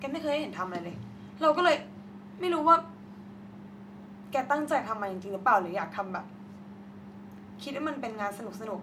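A speech recording, with nothing technically wrong with it.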